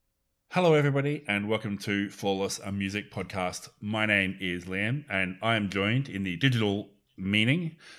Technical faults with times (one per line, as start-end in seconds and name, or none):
none